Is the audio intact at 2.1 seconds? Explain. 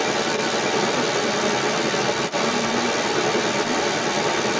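No, at 2.1 s there's other side's voice leaking through, about 10 dB above the talker for the whole clip, likely the echo canceller failing to remove the loudspeaker's sound from the mic.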